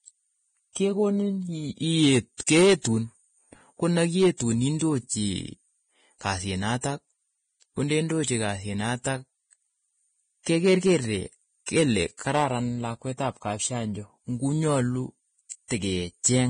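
Throughout the speech, the treble is hissy and grainy, tones sound roughened and attacks blurred, with nothing above 9.7 kHz. This heavy damage likely comes from Vorbis compression, fitting a bitrate near 21 kbps. A spectrogram shows a hard ceiling and noisy, smeared upper bands.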